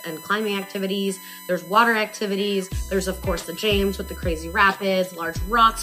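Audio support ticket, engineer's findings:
USB whine throughout: fixed 1 kHz tone, harmonics peaking near 18 kHz, roughly 20 dB under the signal. USB 1 ms frame current leaking through power or ground.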